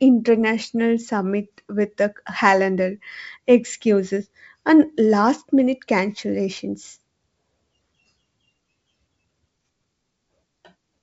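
No technical faults are audible in this speech recording.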